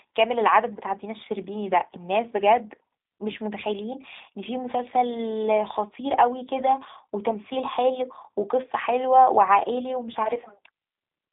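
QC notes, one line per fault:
Throughout, G.729 codec: the speech has passed through a low-rate CELP voice codec, most likely the G.729A variant, and the result fits an 8 kbit/s VoIP link. The line band runs from 200 Hz to 3.7 kHz, with nothing above 3.8 kHz, so the sound is thin and muffled. Each short frame is rebuilt from a vocal tract filter, a pitch predictor and a few pulses, which gives the plainly audible rough, buzzy, synthetic texture.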